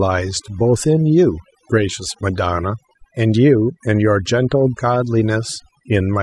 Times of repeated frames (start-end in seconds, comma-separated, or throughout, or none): none